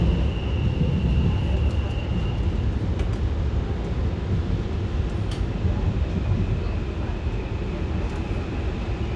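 No technical faults are audible.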